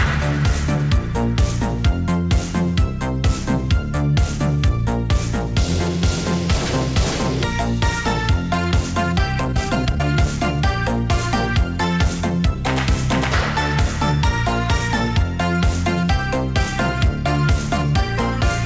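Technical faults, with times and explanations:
7.44 s, skip ahead: about a second of audio was dropped while later audio was already waiting, so playback jumps abruptly forward, joining both sides with no gap.
8.57–10.17 s, jitter buffer speed-up: the buffer trimmed roughly 0.4 s by removing repeated pitch-period slices, so the sound runs at 126% speed, hurried but at unchanged pitch.
11.85–12.90 s, jitter buffer speed-up: a milder trim of roughly 0.1 s, cutting short pitch-period pieces, pushes the sound to 107% speed, slightly rushed with pitch unchanged.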